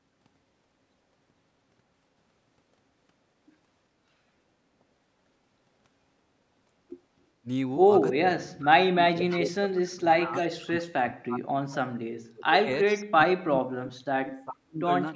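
At 7.41 s the level dips by about 20 dB for roughly 70 ms. This is speech suppressed in double talk, likely from an echo canceller that heard both sides at once and turned everything down. From 8.2 to 10.36 s the same thing happens far more deeply, with drops of about 40 dB across about two seconds. The speech dips sharply, and the waveform collapses into ragged stretches near silence. Within that stretch, at 9.3 s, an echo leak appears: a faint copy of the voice arrives 416 ms late at about 15 dB below the speech. On a spectrogram it shows as a pale smear that repeats the earlier harmonic pattern. A second leak follows at 10.41–10.67 s at about 25 dB down, probably residue that slipped past the canceller from a loudspeaker. Suppression returns from 10.65 to 12.69 s, again about 40 dB deep, and appears as gaps cut through the harmonics. Another 416 ms echo scrap at 12.89 s, about 25 dB down, precedes a final suppressed span from 13.13 to 14.89 s.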